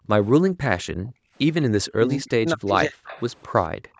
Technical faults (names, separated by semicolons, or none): background gated by the echo canceller; speech suppressed in double talk; echo leak